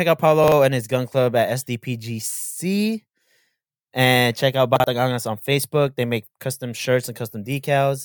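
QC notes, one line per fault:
0.44–0.52 s and 4.76–4.84 s: chunks out of order. In each span two 40 ms chunks of speech play swapped, the earlier one arriving one chunk late. No audio is lost, but the reversed sequence sounds briefly jumbled, with three hard joins.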